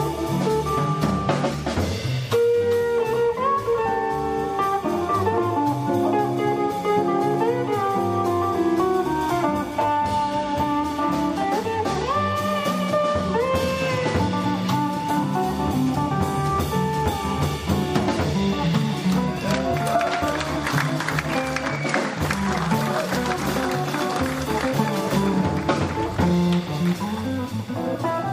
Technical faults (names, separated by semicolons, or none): none